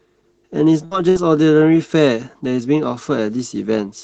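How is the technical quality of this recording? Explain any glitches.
The recording has two short dropouts close together, both bursts of packet loss. The first runs from 0.85 to 0.94 s and the second from 1.09 to 1.18 s. In each, roughly 60 ms of packets failed to arrive in time. The receiver bridged each gap by extending and fading the last sound it had, for about 57 to 59 ms, so you hear a brief held buzz or decaying hiss. The speech then picks up slightly further along, with that stretch gone. The call codec's band limit at 8 kHz is audible as a dull top end throughout.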